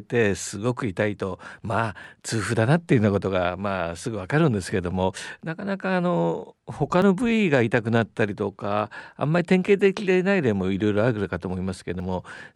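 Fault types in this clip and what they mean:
Audio missing between chunks: the speech skips forward at 2.04, 7.02 and 12.0 s, about 5 seconds apart, each time dropping a sliver of about 20 ms with the two sides butted together. That's likely a recorder losing a bit at each chunk handover.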